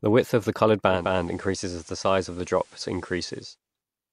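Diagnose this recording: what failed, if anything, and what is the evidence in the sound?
Digital radio blending to analogue, 0.87 to 3.59 s, after "width of the coloured": the receiver lost its digital stream and cross-faded over about 0.26 s to FM. The speech drops about 4 dB and gains hiss roughly 30 dB down, then blends back.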